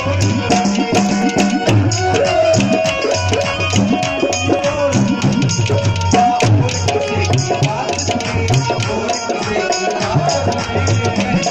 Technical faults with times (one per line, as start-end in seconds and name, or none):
1.22 dropped samples
4.59 dropped samples
7.83 dropped samples
9.39 dropped samples
10.45 dropped samples